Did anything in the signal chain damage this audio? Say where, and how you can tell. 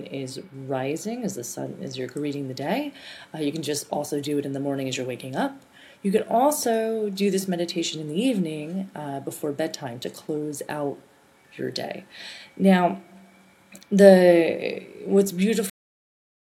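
Yes. At 15.70 s the sound stops mid-event, with no fade or natural decay, and the remaining 0.82 s is flat digital silence. This is a cut-off end, and it happened at the driver or buffer stage: the final buffers of audio were never written to the file or passed to the output. The stream ends on whatever sample the last complete buffer held, so the truncation is abrupt.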